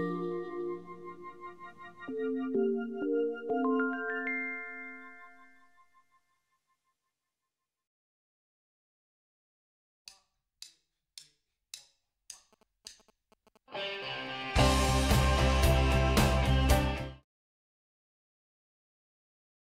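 From 12.53 to 15.46 s a faint, galloping dit-dit-dit of short 217 Hz buzzes sits roughly 30 dB under the sound. These are GSM signalling bursts: a nearby 2G phone's brief radio transmissions, rectified by the audio circuitry into audible interference.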